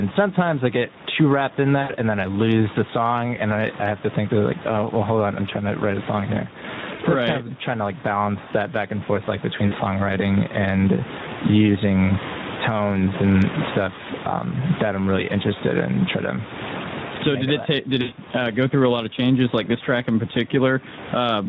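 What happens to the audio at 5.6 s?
At 5.6 s, as everywhere in the clip, gain pumping is present: the level swells and ducks by roughly 25 dB around loud sounds, likely from overdriven gain hitting a fast limiter. The waveform shows flattened peaks and a breathing noise floor. The Speex codec damage also runs throughout, sounding hoarse and buzzy, which fits a bitrate around 11 kbps. On a spectrogram, harmonics look smeared, and the band above 4 kHz is noise-like fill.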